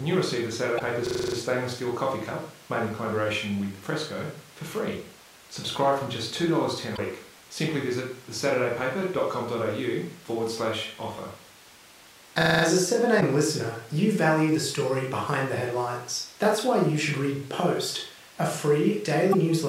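At 0.76 to 0.81 s the speech breaks up briefly. This is damaged data in a compressed stream. Bytes in the encoded file were wrong there. The decoder misread those frames, lost sync and hunted for the next valid frame header. The same glitch, each about 50 ms long, returns at 6.94 to 6.99 s, 13.17 to 13.23 s and 19.29 to 19.35 s.

From 1.07 to 1.37 s comes a system hang loop. The computer or driver froze. The sound hardware kept replaying one ring buffer. A 42.67 ms slice repeats exactly seven times, which fits a 2048-sample buffer. At 23.4 repeats per second it sounds like a rattling buzz. Almost no audio is skipped. The fault recurs from 12.42 to 12.63 s with five repeats.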